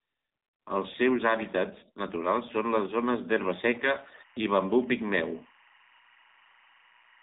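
Throughout, the speech sounds buzzy, thin and synthetic, with nothing above 4 kHz. That is the AMR narrowband mobile codec, whose pulse-driven vocal-tract model, with damage at a level that fits the 7.4 kbps mode, strips detail and adds that artificial edge. From 3.51 s to the end, a steady chirping warble near 1 and 2 kHz sits about 30 dB beneath the speech. This is timecode bleed: linear timecode at 23.976 frames per second leaking in from a neighbouring track or cable.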